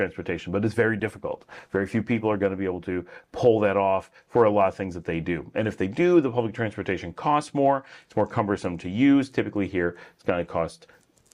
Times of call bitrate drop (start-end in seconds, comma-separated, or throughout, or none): 1.00-3.42